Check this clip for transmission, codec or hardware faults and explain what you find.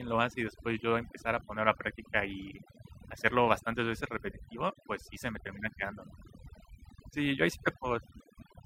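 One processing fault runs through the whole clip: overdone noise removal. The background drops and breaks up into twinkling specks. A noise reducer set too aggressively is cutting individual frequency bands whenever they sit near its noise estimate, taking the quieter parts of the speech with them.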